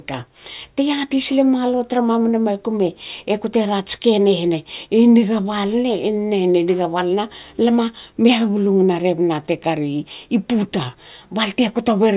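No technical faults can be heard anywhere in the recording. The speech audio carries on without any event that calls for comment.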